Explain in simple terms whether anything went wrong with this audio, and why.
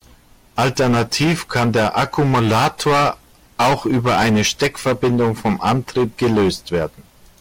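Yes, the speech suffers from hard clipping from start to finish. It was recorded far louder than the equipment could handle, so a good share of the loudest moments are sliced flat. This produces a harsh fuzz on every loud syllable, unlike steady hiss, which stays even during quiet parts.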